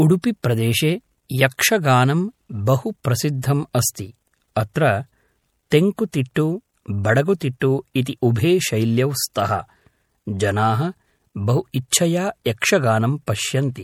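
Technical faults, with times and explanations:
Throughout: MP3 compression, likely the cause of the watery, swirly texture on the speech. Weak frequency lines drop in and out between frames, and sibilants turn metallic. The damage is plainly audible, which fits a low bitrate around 64 kbps. Content stops at about 20.7 kHz.
0.43, 3.04, 3.42, 5.70, 11.91 and 13.26 s: pre-echo. A hiss runs about 13 to 19 ms ahead of each sharp attack, including two right after "यक्षगानं बहु". The codec spreads its block's quantisation noise into the quiet moment before the onset, which softens each attack.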